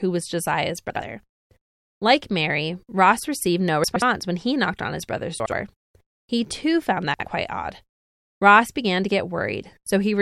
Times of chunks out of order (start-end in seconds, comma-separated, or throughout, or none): 0.90-1.02, 3.84-4.02, 5.40-5.52, 7.14-7.26